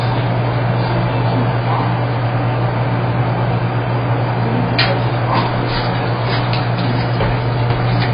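AAC compression runs through the whole clip, from start to finish: nothing survives above about 5 kHz, so the sounds come across dull and muffled, with a smeared, watery texture and a fizzy warble wherever a sound sustains. The likely cause is AAC-LC coding at a very low rate, around 16 kbps, where the encoder lowers its cut-off and quantises the remaining frequency lines so coarsely that gaps and substitute noise replace real detail.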